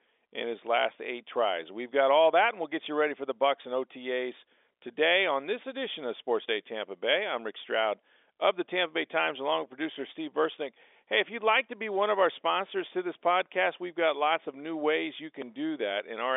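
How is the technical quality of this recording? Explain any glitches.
The technical quality of this recording is sound, with no glitches to explain, only the narrow band of an ordinary G.711 telephone line.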